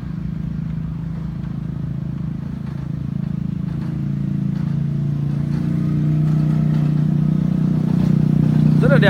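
No technical faults can be heard anywhere in the recording. There is nothing here that calls for a timestamp or a closer look.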